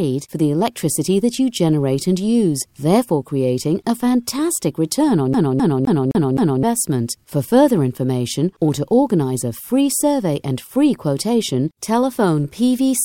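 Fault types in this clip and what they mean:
CD stuck on one turn: A scratch keeps throwing the laser back to the same spot on each rotation. From 5.33 to 6.63 s, one 0.26 s slice of sound plays five times over. A short mute marks each jump, giving a fast, even stutter.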